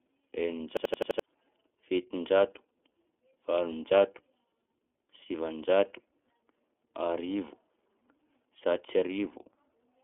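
Throughout, the speech passes through the iLBC codec. It holds a narrow 250 Hz to 3.5 kHz band, with nothing above 3.8 kHz. Each 30 ms frame is coded separately, leaving a plainly rough, synthetic edge.

From 0.77 to 1.2 s, a system hang loop strikes. One 85 ms slice, which fits a 4096-sample buffer, repeats five times at 11.7 Hz. It sounds like a machine-gun stutter, and nearly half a second of speech is lost.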